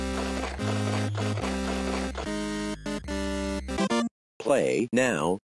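No technical faults can be heard anywhere in the clip. Nothing in the audio points to a dropout, a distortion or a timing problem at any point.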